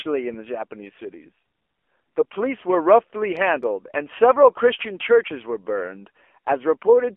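Thin, boxy speech with a buzzy, synthetic edge runs through the whole clip, and everything above 3.4 kHz and below about 300 Hz is missing, which is the telephone band. That is the AMR narrowband mobile codec: 8 kHz sampling caps the top end, and each 20 ms frame rebuilds the voice from a vocal-tract model fed by a few pulses. The plainly audible coarseness fits a low mode around 7.4 kbps.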